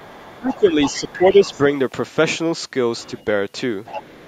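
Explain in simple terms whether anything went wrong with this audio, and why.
A second, fainter voice, the other side's voice leaking through, appears from 0 to 1.13, 1.31 to 1.58, 2.99 to 3.24 and 3.85 to the end. This is likely an echo canceller missing loudspeaker sound.

The main voice gets noticeably quieter from 0.39 to 0.76 and 0.98 to 1.42. This is speech suppressed in double talk, likely turned down while both sides overlapped.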